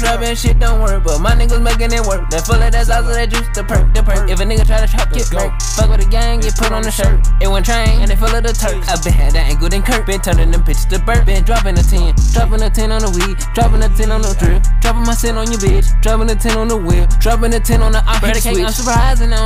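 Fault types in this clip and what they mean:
No audible faults anywhere in the recording.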